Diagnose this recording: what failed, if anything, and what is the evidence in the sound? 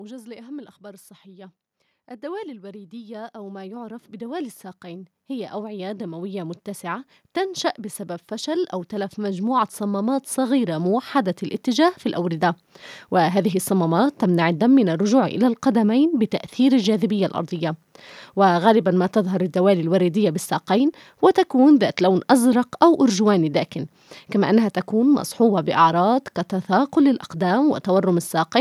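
Automatic gain rising in the call-processing stage: from 2.2 to 7.16 s the level climbs about 11 dB, then again from 7.76 to 12.5 s by about 9 dB. Speech and background noise swell together, so the waveform envelope ramps upward and the spectrogram's noise floor brightens evenly across frequencies.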